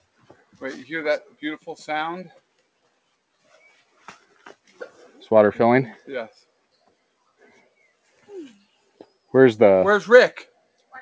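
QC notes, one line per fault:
0.19–0.61 s, 4.01–5.26 s and 7.4–7.67 s, sound cut by the noise suppressor: the suppressor mistook wanted sound for noise and pulled it down, by about 16 dB in the first patch and about 11 dB in the other two. That's roughly a third of a second, most of a second, then a fifth of a second of audio sinking or losing its tail.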